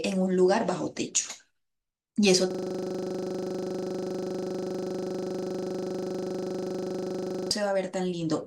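At 2.51 s the speech freezes into a system hang loop that lasts until 7.51 s. The machine or its audio driver stopped responding, but the sound hardware kept replaying its ring buffer. A single 40 ms slice of audio repeats exactly, about 125 times. At 25 repeats per second, it sounds like a harsh, rapid stutter with a buzzy edge. Nothing new is heard until normal audio returns.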